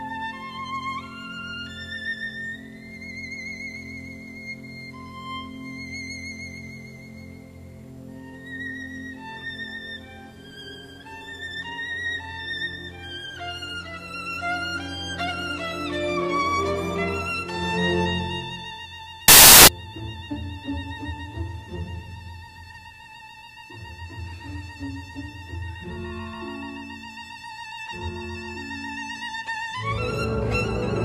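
From 19.28 to 19.68 s, samples built from the wrong bytes turn the audio into loud, harsh broadband noise, appearing as dense waveform hash and broadband spectrogram energy.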